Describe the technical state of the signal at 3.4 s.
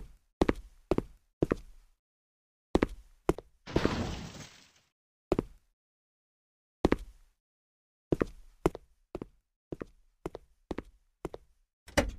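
At 3.4 s you're inside a sudden gain jump running 3.35 to 3.76 s: the level drops about 12 dB in one step, background included, likely an unramped digital gain change.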